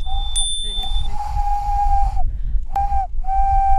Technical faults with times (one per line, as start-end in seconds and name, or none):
2.74 CD skip